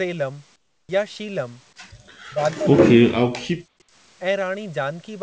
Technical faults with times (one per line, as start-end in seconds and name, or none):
0.56-0.89 comfort noise in place of the background
2.29-3.68 speech suppressed in double talk